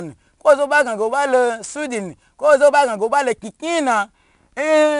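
From start to finish the speech carries 4-bit ADPCM compression. It is plainly audible as a gritty hiss on every louder syllable, and consonant onsets sound roughened where the coarse 4-bit step cannot grow fast enough to follow sudden jumps. Nothing reaches above 10.6 kHz, which dulls the top end and fits a sample rate near 22 kHz and a stream of about 89 kbps. A spectrogram shows a hard ceiling at 10.6 kHz, with broadband noise that rises and falls with the signal level.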